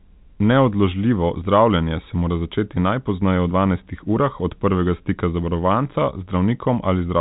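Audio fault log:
No faults are present in the speech, which carries the narrow band of G.711 telephone coding, with nothing above 4 kHz, as expected from a 64 kbps A-law telephone channel working as intended.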